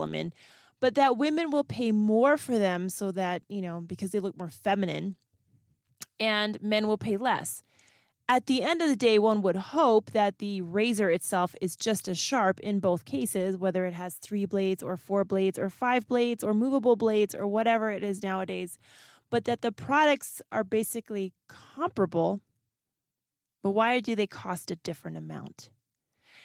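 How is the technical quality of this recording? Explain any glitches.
The recording has no glitches or dropouts; it carries the light, slightly softened character of Opus voice compression, with the full audio band retained, which fits a hybrid-mode stream at around 20 kbps.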